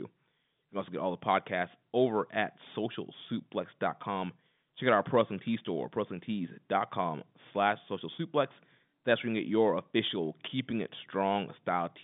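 No faults in the speech; the path is standard G.711 telephone coding, passing roughly 150 Hz to 3.6 kHz with nothing above 3.7 kHz, which fits A-law at 64 kbps.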